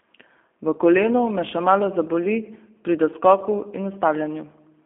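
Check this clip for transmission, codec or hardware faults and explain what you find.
The clip has one fault, present from start to finish: G.729 codec damage. The speech has been rebuilt by a low-rate speech codec. It models the vocal tract with a filter, adds a pitch predictor, and places a few pulses per short frame. The roughness points to around 8 kbit/s. The band runs from about 250 Hz to 3.4 kHz, with nothing above 3.6 kHz. The speech stays intelligible but sounds plainly rough, thin and somewhat synthetic.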